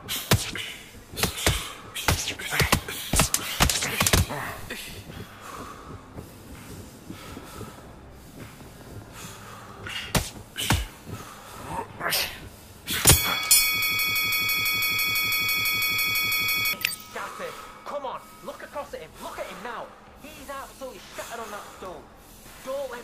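The audio has a broken-record loop from 13.82 to 16.73 s: a 166 ms fragment repeats exactly, back to back, 17 times, so the sound stutters at about six repeats per second and whatever should have played there is lost. The likely cause is a player, encoder or stream that stalled and kept resending its last held fragment. On a spectrogram or waveform this shows as one identical block tiled at regular 0.17 s intervals.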